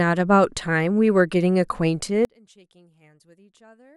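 From 2.25 s to the end, the speech collapses when summed to mono, dropping by about 32 dB to a faint residue. The likely cause is one channel inverted: reversed polarity on one side cancels the centred content common to both channels.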